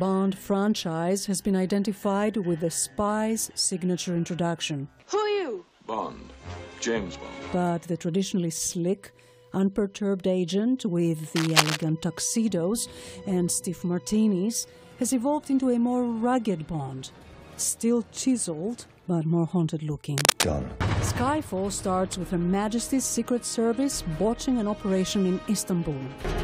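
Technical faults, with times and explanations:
11.35–11.83 s and 20.17–20.46 s, cable scratch noise: Two brief bursts of dense, uneven scratching sit over the sound. The first is about as loud as the sound, and the second is a little louder. A worn cable or connector being moved is the likely cause, its contact resistance flickering rapidly.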